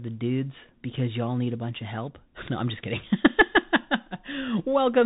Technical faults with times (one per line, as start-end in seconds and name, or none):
0.00-5.05 Bluetooth CVSD headset codec